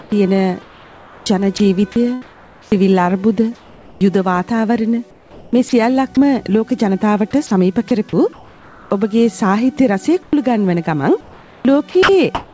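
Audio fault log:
0.00–2.75 s, 7.47–8.91 s, 11.21–12.53 s: sound chopped by the voice detector. The sender's voice detector likely toggled transmission on and off repeatedly, so about 1.3 s, 0.7 s and 0.7 s of sound were replaced with synthetic comfort noise. The audio turns choppy.
3.55–4.01 s and 5.11–5.73 s: comfort noise in place of the background. Transmission likely paused during quiet stretches, and the receiver filled about 0.46 s of each gap with generated noise. The detailed real background gives way to a flat, featureless hiss, about 6 dB quieter in the first gap.
3.98–4.01 s: onset clipped by the voice detector. The detector was likely slow to register that sound had resumed, so the first 30 ms was never sent and comfort noise stood in for it. The sound starts abruptly, without its soft beginning.
5.69–5.73 s and 10.23–10.33 s: sound dropped by the voice detector. The detector likely mistook quiet sound for background and stopped sending, losing about 40 ms and 60 ms of sound. 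Steady noise fills each gap until the detector triggers again and the sound returns.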